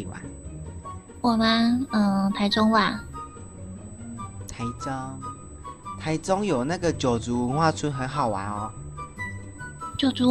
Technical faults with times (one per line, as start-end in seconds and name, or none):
0.00-10.31 USB whine